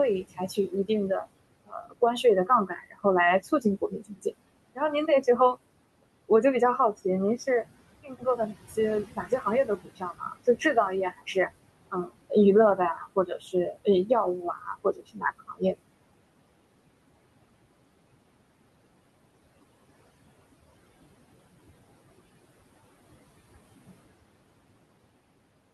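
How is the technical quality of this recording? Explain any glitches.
The recording is marred by heavy noise suppression, which both colours the whole clip and eats into the speech in several places.

Noise suppressor artifacts run throughout. The suppressor pulls down the bands it judges to be steady room noise, which sits about 18 dB under the speech, by about 21 dB, frame by frame. The background sinks in pauses and swells beneath speech. On a spectrogram the noise floor looks blotchy and patchy, darkening between phrases; the waveform's quiet stretches pump up and down.

Speech cut by the noise suppressor occurs at 1.66–3.05 s, 3.61–4.32 s, 8.03–8.39 s, 9.16–10.61 s, 11.91–12.31 s, 13.16–14.1 s and 14.42–15.8 s. Here the suppressor mistook parts of the speech for noise and turned them down with the background, by up to about 21 dB. Only brief portions within each span are hit, adding up to a few tenths of a second each, so the affected speech sounds swallowed or faint. 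Spectrograms show speech energy abruptly hollowed out; the waveform envelope dips sharply mid-phrase.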